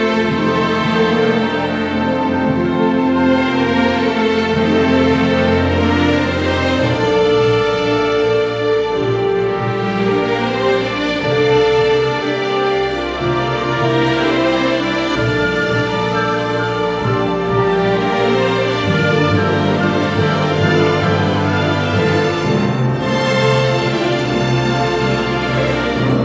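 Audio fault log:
No faults heard; call microphone processing sounds as expected.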